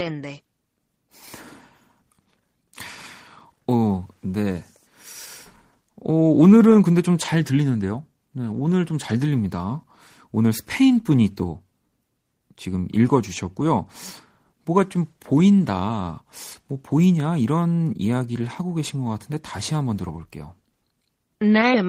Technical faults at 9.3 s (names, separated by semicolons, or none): none